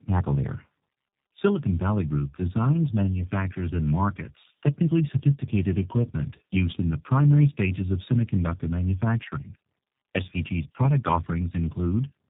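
From start to finish the speech sounds rough, muffled and warbly, with nothing above 3.8 kHz. This is tandem speech coding: two low-rate speech codecs in a row, which fits G.723.1 and then G.729A, the second recoding the first's already degraded output and compounding its damage.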